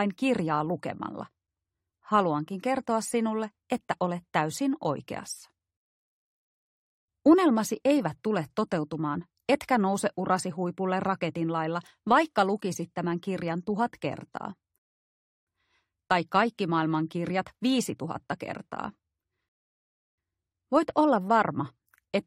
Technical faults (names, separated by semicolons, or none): rebuffering stall